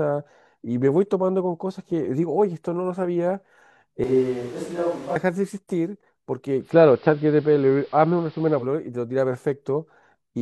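From 4.04 to 5.16 s the speech suddenly turns hollow and roomy, thinner in the bass and roughly 5 dB quieter, while room noise rises to only about 25 dB below the speech. Both changes switch in and out abruptly. The likely cause is a switch to a distant microphone: the close microphone dropped out and a mic further from the talker, hearing more of the room, briefly took over.

At 6.60 s a 139 ms cross-fade brings in a duller, band-limited sound, a level change of about 4 dB, and steady hiss roughly 30 dB below the signal. It lasts until 8.69 s, when it fades back. This is digital radio blending to analogue: the receiver lost its digital stream and fell back to the station's AM broadcast, whose narrow bandwidth cuts off the treble.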